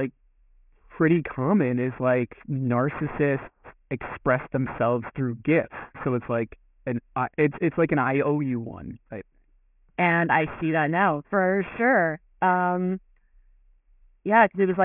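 Aliasing throughout: unfiltered downsampling, consistent with a 6 kHz rate, folds content above 3 kHz back as gritty, metallic tones about 20 dB down.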